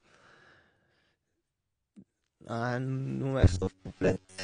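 A speech recording with two problems. Throughout, nothing is left above 9.7 kHz, and the damage is plainly audible: a dull, smeared top with a fizzy, warbling edge on sibilants. That is likely AAC compression, AAC-LC at a low rate, around 32 kbps. From 3.40 s to the end, the speech turns into a rigid metallic buzz at 93.8 Hz. It still loosely tracks the speech. This is likely robotic sound from repeated short buffers. A slice of about 10.7 ms is replayed over and over while roughly seventy percent of the real audio is skipped.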